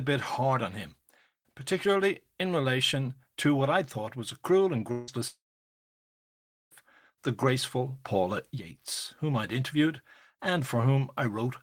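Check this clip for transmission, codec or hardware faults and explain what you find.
Two long network dropouts interrupt the speech, likely from packets failing to arrive. At 4.91–5.10 s, after "was a cruel and", the receiver stretches the last sound into a fading buzz across the gap. From 5.27 to 6.74 s it fills only briefly, then falls silent for about 1.3 s before "the graceful". The lost speech never returns.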